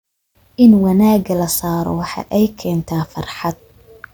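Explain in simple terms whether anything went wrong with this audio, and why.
Nothing went wrong with the recording itself: the speech comes across steady and intact, with no gaps, glitches or damage to the sound anywhere in it.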